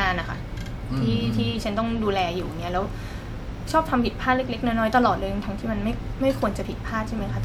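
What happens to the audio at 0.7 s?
Nothing goes wrong at 0.7 s; the speech continues intact through that moment with no dropout, glitch or distortion.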